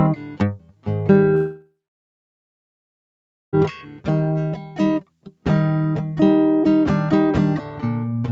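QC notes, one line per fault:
Throughout: noise suppressor applied to music. A speech-oriented suppressor is still on, so it keeps mistaking the music's sustained tones and ambience for noise and pulling them down. The level swings by something like ten dB as it decides what to keep. Attacks punch through while held parts and tails sag, which gives the whole piece a pumping, hollow feel. The top end stops around 8 kHz, which is normal for this call path.
0.16–0.87 s, 3.82–4.07 s, 4.55–4.79 s, 5.00–5.45 s: sound cut by the noise suppressor. In each of these stretches the suppressor clamps down harder than usual, dipping the music by up to about 12 dB. Sustained and decaying material takes the hit, so notes seem to shrink or have their tails chopped early, while onsets come through mostly intact. The first run is the longest, with about half a second of it affected. The later ones are shorter, each a few tenths of a second.
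1.35–3.55 s: long network dropout. For a bit over two seconds the real audio simply isn't there. Right at the start the last bit of sound gets smeared forward as a brief fading buzz or hiss, then it goes quiet for roughly 1.8 s before the music resumes further along, with the missing part gone. That pattern is likely a stall in the incoming stream, with the receiver's concealment running out and falling back to silence.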